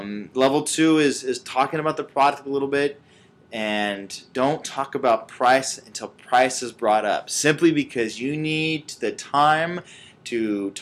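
A Bluetooth SBC bit pool drop runs from 3.93 to 4.88 s. Congestion forced the encoder to spend fewer bits per frame, so the treble dulls and gritty quantisation noise rises. This fits a bit pool falling from 28 to 13, near 102 kbps.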